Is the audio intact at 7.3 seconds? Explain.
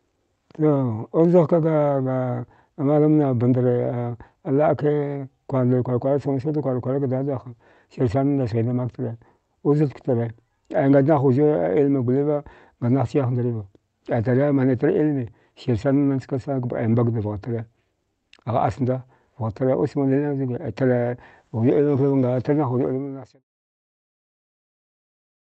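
Yes, the audio is intact at 7.3 seconds, with no dropout, click or other fault at that point in the speech.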